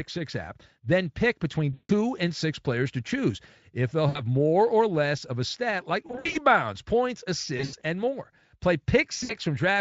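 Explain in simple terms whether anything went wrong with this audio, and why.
VoIP packet loss concealed by the speech codec breaks up the speech at 1.73, 4.09 (after "to choose if they'll"), 6.07 (after "of a stat like"), 7.57 (before "and more") and 9.23 s. Bits of the call went missing, and the decoder guessed by stretching the last sound into a fading buzz. At 6.07 and 7.57 s the gaps come in scattered bursts.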